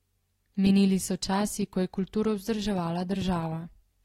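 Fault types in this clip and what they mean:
Loud pop: a single sharp pop between 3.22 and 3.24 s, about 25 ms long and peaking roughly 5 dB above the speech, which carries on underneath without a break. That continuity separates it from a dropout, where the sound is cut away. Its one short hit separates it from crackle, which scatters many tiny ticks. The likely cause is a sudden voltage step or pulse, such as a plug, switch, static or driver glitch.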